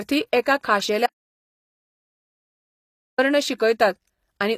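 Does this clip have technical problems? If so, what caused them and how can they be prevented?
Yes. Throughout, the speech carries HE-AAC compression artefacts that are plainly audible: s sounds turn gritty and metallic, with nothing above 14.9 kHz. The treble is rebuilt by copying lower bands upward, which fits a low bitrate around 24 kbps and is likely the cause. Unlike plain low-pass MP3 damage, the top stays bright but has a synthetic, misaligned quality. Encoding at a higher bitrate, or with AAC-LC instead of band replication, prevents it.

From 1.06 s to 3.18 s there is an audio dropout to silence lasting about 2.1 s, complete silence with no room tone, so the speech stops mid-flow and resumes abruptly. This likely comes from the input signal being lost while recording continued. A quiet pause would keep background hiss, and this does not. Securing connections and monitoring input levels during recording prevents it.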